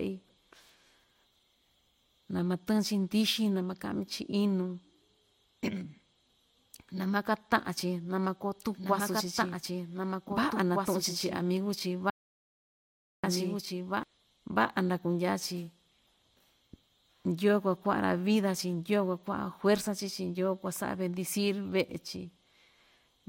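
At 8.59 s, just after "na makoo", a doubled audio track begins and runs to 14.03 s. A second full-band copy of the speech trails by about two seconds, roughly 5 dB quieter. It has no decay or room colour. It starts and stops abruptly. It was likely captured twice through a slower path, or an edit held two copies out of step.

From 12.10 s to 13.24 s there is an audio dropout to silence. The sound cuts out mid-flow for 1.13 s, then returns. The gap holds no room tone. Whatever was spoken there is lost. The input was likely lost through a disconnected device, a failed link or a stray mute.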